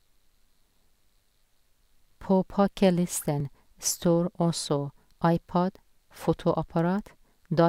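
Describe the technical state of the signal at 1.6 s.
At 1.6 s the speech signal is intact, with no dropout, clipping, glitch or other fault audible at that point.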